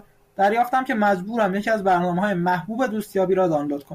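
Nothing in the speech here stands out as a technical fault, so there's really nothing to flag.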